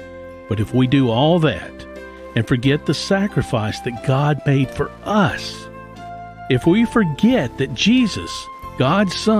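Wi-Fi interference runs throughout the audio: a steady tick repeats every 102.4 ms, about ten times a second, roughly 40 dB below the signal. A nearby Wi-Fi radio's beacon bursts are being rectified inside the audio circuit, which turns the radio pulses into audible clicks.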